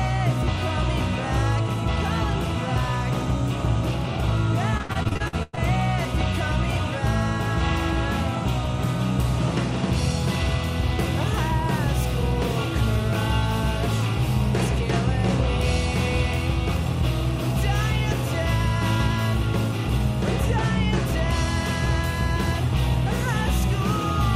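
From 4.77 to 5.59 s there's repeated packet loss: rapid dropouts patched by stretching the last sound, nearly half the span concealed, giving a choppy, robotic stutter.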